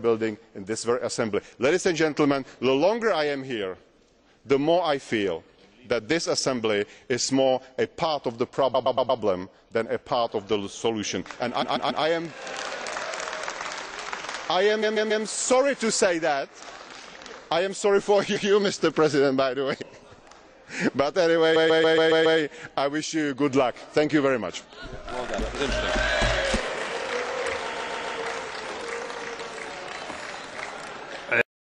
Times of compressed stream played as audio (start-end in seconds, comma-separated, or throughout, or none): none